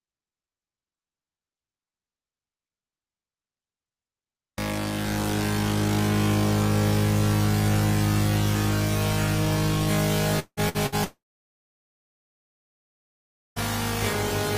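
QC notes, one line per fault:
10.39–10.60 s, long network dropout. The last sound is held and fades for about 175 ms, and its final 60 ms is silent. The sound then resumes about 180 ms further on. The likely cause is that no audio arrived, so the receiver stretched what it had.
10.69–10.77 s and 10.86–10.95 s, burst of packet loss. Each gap is covered by a short fading continuation of the last sound, 55 and 57 ms long. About 60 ms of audio is missing each time. Lost or late packets left the receiver filling in.
11.04–13.59 s, long network dropout. The preceding sound trails off briefly, then about 2.37 s of silence follows. Roughly 2.52 s of audio is skipped when sound returns. This likely reflects an extended stall in arriving audio.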